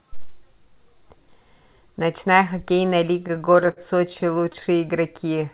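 From 3.14 to 4.79 s the speech falls into repeated stalls (stutter): eighteen brief hitches in which packets reached the receiver too slowly, the jitter buffer ran dry, and the last sound was stretched to cover each wait, the longest about 58 ms. Roughly 0.23 s is filled this way, about 15% of that stretch. Unlike packet-loss dropouts, nothing is skipped. The speech drags and stammers, heard through the narrow, 4 kHz-limited telephone band.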